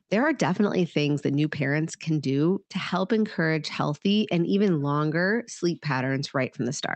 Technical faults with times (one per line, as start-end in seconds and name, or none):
none